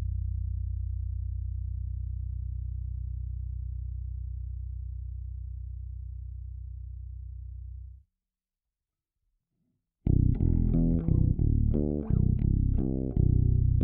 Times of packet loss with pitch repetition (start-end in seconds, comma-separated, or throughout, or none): none